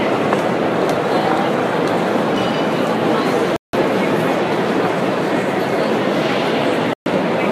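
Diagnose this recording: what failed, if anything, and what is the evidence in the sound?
The failure is at the reception and decoding stage: a digital broadcast dropout occurs twice. The sound cuts to silence from 3.56 to 3.78 s and again from 6.93 to 7.11 s, then resumes later in the programme rather than where it stopped. The receiver lost the signal or received frames that failed their checksum and muted until valid frames arrived. About 171 ms and 128 ms of programme are missing, which points to four and three frames discarded.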